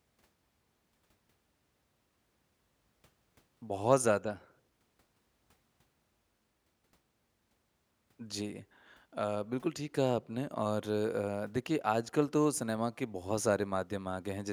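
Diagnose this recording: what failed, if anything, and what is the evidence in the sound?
Nothing failed in this recording, and the sound gives no evidence of a fault at any stage.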